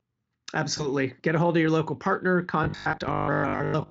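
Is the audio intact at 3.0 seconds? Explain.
No. At 3.0 seconds you're inside a stretch of robotic sound from repeated short buffers that runs from 2.64 s to the end of the clip at 3.90 s. The speech has gone rigid and metallic, with a steady 50 Hz buzz imposed on it, still loosely tracking the words. That's likely new audio arriving too seldom, so the same short chunk gets replayed to fill the gap. A 50 Hz repeat rate fits a 20 ms buffer, and most of the real audio in this stretch is skipped rather than played.

Just before that, from 2.91 s to 2.97 s, there's VoIP packet loss concealed by the speech codec. One 20 ms frame went missing, and the decoder filled it by extending the previous pitch and spectral shape at falling gain, so the sound smears into a brief, fading buzzy tone or coloured noise. Because the decoder builds each frame on the one before, it takes a little while to recover after that, and at 3.0 s the speech is still coming out of it.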